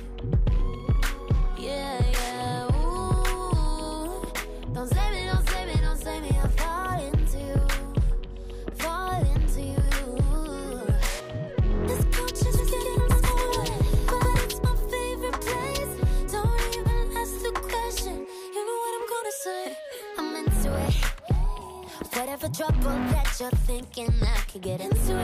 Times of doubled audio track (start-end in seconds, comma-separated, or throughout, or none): 12.53-14.39